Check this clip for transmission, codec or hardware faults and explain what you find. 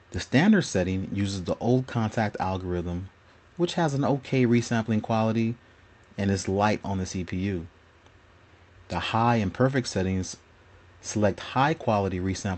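No faults detected.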